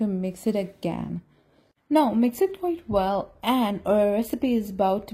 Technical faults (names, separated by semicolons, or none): adaptive stream at a lower bitrate